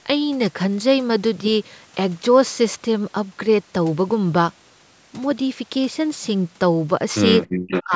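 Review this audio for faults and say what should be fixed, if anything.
From 7.46 to 7.56 s the room sound abruptly drops by about 31 dB, then returns: background gated by the echo canceller while the loudspeaker played.

Between 7.68 and 7.84 s a delayed copy of the speech, about 386 ms late and nearly as loud as the talker, is likely an echo leak from a far-end loudspeaker.

From 7.84 to 7.93 s the talker's speech sinks deeply for about a tenth of a second, likely speech suppressed in double talk when both sides spoke together.

Better acoustic echo cancellation with stronger double-talk detection and gentler suppression, or a headset instead of a loudspeaker, would prevent all three.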